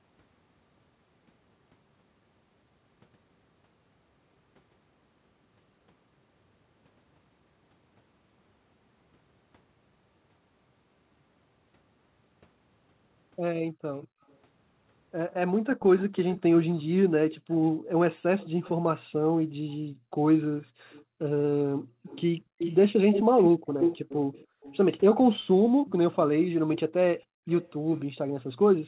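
At 13.7 s the room sound drops by about 40 dB, off and on until 14.21 s, for roughly 0.3 s in all. This is background gated by the echo canceller. The canceller hears loudspeaker playback and turns the microphone down hard. The room tone vanishes, then returns when it lets go.

From 14.01 s to 18.71 s a faint copy of the talker follows 239 ms behind, about 20 dB under the speech. This is an echo leak. The likely cause is a far-end loudspeaker whose echo canceller let part of the playback back into its microphone.

Gating returns from 17.37 s to 24.62 s, again dipping about 40 dB. It cuts in and out for about 2 s in total. The background keeps thinning and recovering.

From 20.91 s to 28.0 s a second echo leak arrives 303 ms late. It is much stronger, only about 5 dB below the speech. It sounds like a near-equal second voice trailing the first.

From 27.26 s to the end the canceller gates the background once more, down about 40 dB. 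The whole clip stays within 4 kHz, which fits a narrowband telephone codec.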